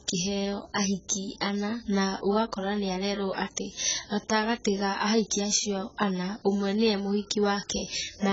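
Speech encoded at a very low bitrate, which fits roughly 12 kbps, shows AAC compression, likely AAC-LC. Throughout, nothing sounds above about 7.7 kHz, so the sound is dull, and heavy quantisation gives sibilants and held sounds a smeared, warbling, fizzy texture.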